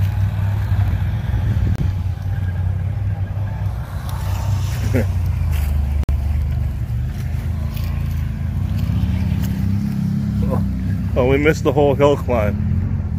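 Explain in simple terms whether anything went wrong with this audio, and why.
The sound drops to brief silence at 1.76–1.79 s (about 28 ms) and 6.04–6.09 s (about 53 ms), then resumes: a likely Bluetooth stall, where delayed wireless packets let the headphones' buffer run empty.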